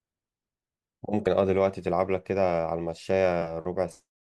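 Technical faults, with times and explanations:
1.26 s, compressed frames skipped: the speech jumps forward by roughly two frames of about 23 ms each, so around 50 ms of audio never plays.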